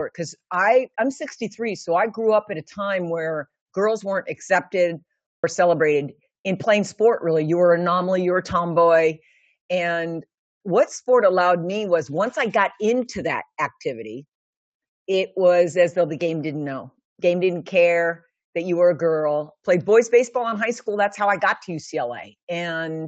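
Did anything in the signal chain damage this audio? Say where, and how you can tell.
Yes, at the playback stage. From 5.27 s to 5.44 s the sound drops out abruptly for about 167 ms and then picks up again. It is a gap in mid-flow, set against a band that tops out at 8 kHz from the call path. This is a playback stall. The likely cause is that the output ran short of data or its audio thread was briefly blocked, so it wrote silence until the buffer refilled.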